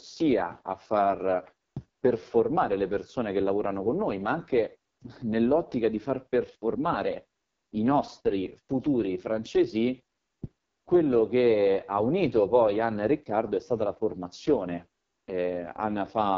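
From start to finish the speech carries AMR wideband (HD Voice) codec damage, and it is heavy: voiced sounds come out rough and raspy, and nothing is present above about 7.4 kHz. That coarseness fits the codec's lowest mode, around 6.6 kbit/s, where too few bits remain to model the voice cleanly.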